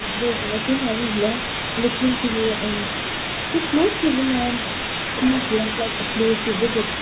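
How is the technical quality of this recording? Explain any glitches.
There's one glitch worth flagging, a brief echo leak right at the start, and the rest sits inside the usual narrowband call sound, with nothing above 4 kHz as you'd expect from a G.711 line.

From 0.00 to 0.04 s there's a faint, delayed copy of the speech trailing about 216 ms behind, sitting well below the main voice. It's likely an echo leak: the far end was on a loudspeaker, and its echo canceller let a scrap of what its mic picked up slip back down the line.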